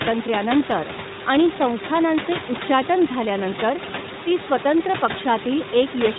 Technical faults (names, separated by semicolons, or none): iLBC codec